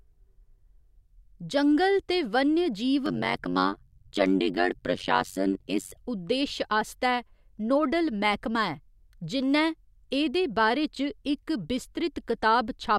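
After "जंगल ते वन्यजीव", from 3.06 to 5.98 s, overlap-add ripple: frames rejoined with mismatched overlap gain dip about 60 dB once per frame, around 100 times a second, giving a metallic buzz with extra tones around each note. The waveform shows regular notches, and the spectrogram shows evenly spaced vertical stripes, ending before "उद्देश आस्तै नोडल".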